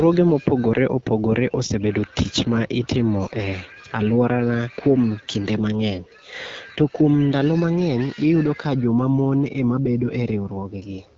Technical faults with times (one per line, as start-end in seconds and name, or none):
0.00-11.17 AMR wideband (HD Voice) codec